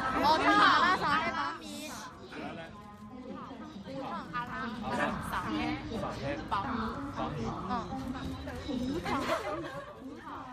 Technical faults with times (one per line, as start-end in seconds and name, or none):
3.76-5.32 zipper noise